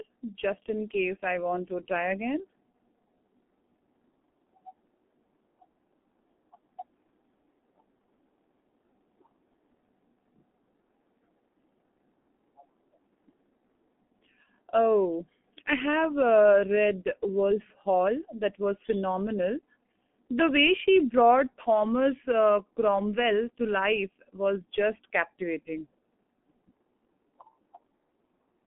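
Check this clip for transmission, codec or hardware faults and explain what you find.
The whole clip, start to finish, has one fault: G.723.1 codec damage, and it is heavy. The speech sounds muffled and hoarse, with consonants smeared together and nothing bright above the telephone band of about 200 Hz to 3.4 kHz. The codec carries the voice as a coarse model updated once per 30 ms frame, so rapid changes get averaged away. The thinness fits a rate of roughly 6 kbit/s.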